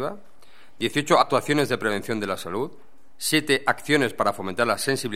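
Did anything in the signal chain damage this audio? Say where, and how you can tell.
Yes, compressed frames were skipped at the codec stage around 1.21–1.23 s. The audio jumps ahead by around 50 ms. That's about two 23.2 ms frames that were never decoded.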